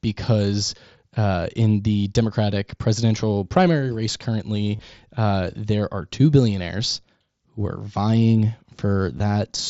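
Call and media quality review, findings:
Concealed Bluetooth headset packet loss at 4.76–4.79 s (after "presidential primary race") and 9.18 s. Receiver repeats recent waveform, giving a brief buzzy fill at full level rather than a silent dropout.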